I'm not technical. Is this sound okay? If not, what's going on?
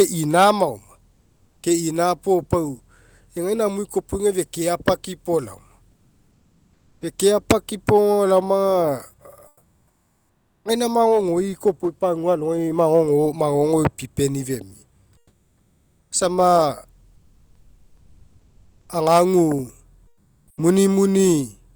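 No. In the pauses at 1.15–1.63 s, 5.95–6.97 s, 9.49–10.63 s, 15.19–16.09 s (right after "magogoipipeni femia") and 20.11–20.47 s, the room sound goes flat, and in all but the second pause a little quieter. This is comfort noise in place of the background. The call system likely stopped sending during silence and filled the gap with artificial hiss.

At 10.61 s the speech that returns starts abruptly, with its first sliver missing. This is an onset clipped by the voice detector, likely because it noticed the speaking resume slightly late, so that tiny beginning was never sent.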